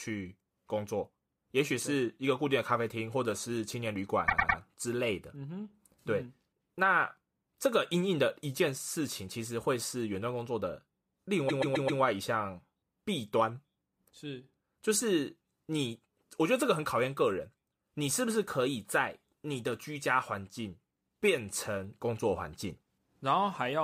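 Speech with two bursts of repeated frames. At 4.27 s, a 104.5 ms block plays three extra times, adding 313.5 ms. At 11.48 s, a 130.6 ms block plays four extra times, adding 522.4 ms. Each stutters because the decoder replays the same compressed frames.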